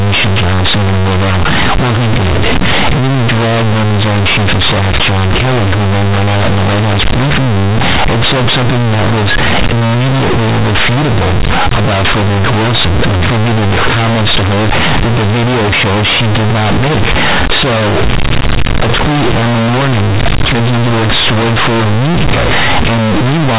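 Speech carried over G.711 telephone coding, with nothing above 4 kHz, suffers throughout from companded audio read as linear: mu-law bytes played as plain 8-bit samples, producing loud buzzy distortion, waveforms bent out of shape with quiet sounds as large as loud ones, and bright broadband noise filling pauses on a spectrogram.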